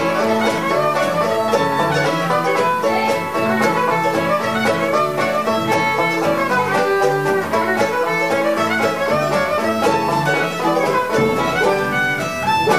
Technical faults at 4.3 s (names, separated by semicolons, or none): low bit depth with dither